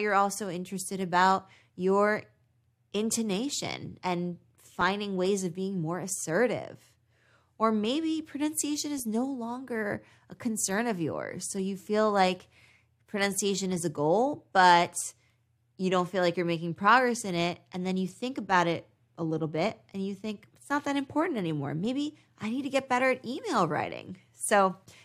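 Nothing technical goes wrong anywhere in this speech recording, so there's no fault to point to at any moment.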